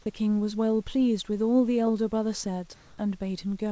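From 2.74 to 2.98 s, a 240 ms pause loses its natural background, about 28 dB below the loud parts, to a flat, featureless hiss that shifts level by about 3 dB. This is likely comfort noise in place of the background, unlike a dropout, which would leave silence.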